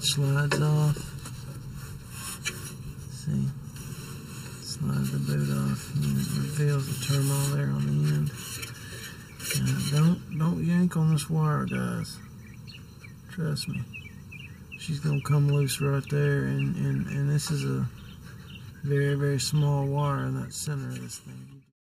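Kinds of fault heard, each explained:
Channel delay (comb filtering): One channel runs late by roughly 0.7 ms, and the two are mixed to mono. Shared content cancels at evenly spaced frequencies, starting near 700 Hz and repeating about every 1.4 kHz. The whole clip sounds hollow and phasey.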